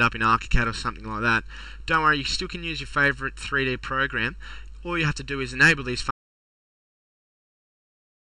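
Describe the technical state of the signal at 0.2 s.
At 0.2 s the sound is hollow and phasey, with fixed notches starting near 700 Hz. This is channel delay (comb filtering), present throughout the clip: one channel lags the other by under a millisecond, and summing them to mono cancels evenly spaced frequencies.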